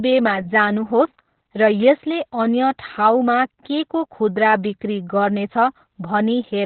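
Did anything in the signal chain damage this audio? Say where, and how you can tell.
Yes, at the codec stage: Opus voice compression in its narrowband SILK mode, heard throughout the clip. Nothing reaches above 4.2 kHz, and the coarsely coded excitation leaves the speech muffled, hoarse and slightly robotic, which points to a bitrate around 8 kbps.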